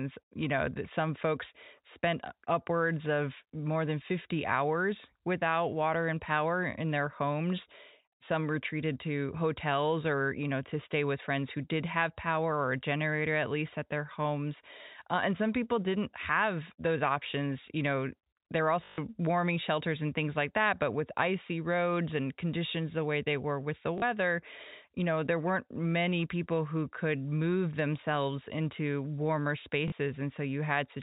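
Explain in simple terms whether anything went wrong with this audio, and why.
A few short dropouts hit this speech, each a case of packet loss with last packet repeated. Audio went missing and the same tiny slice was replayed to fill the gap, giving a brief robotic stutter at 18.84 to 18.98 s, 23.98 to 24.02 s and 29.88 to 29.92 s. The first gap is the longest, and all three fit 20 ms packets. The telephone-style sound comes from G.711 telephone coding.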